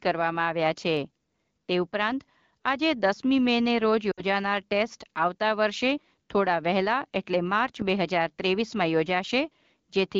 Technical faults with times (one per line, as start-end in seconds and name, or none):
4.12-4.22 lost AMR speech frames